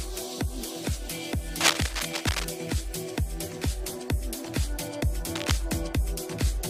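From 1.60 to 2.45 s, and again briefly from 5.35 to 5.51 s, dense, uneven bursts of cable scratch noise sit over the sound at roughly its own level. The likely cause is a worn cable or connector being moved, so its contact resistance fluctuated rapidly.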